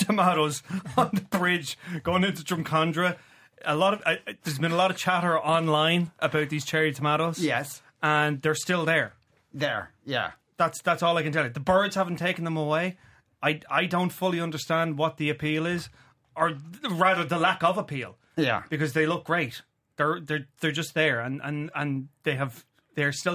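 No technical faults can be heard anywhere in the recording.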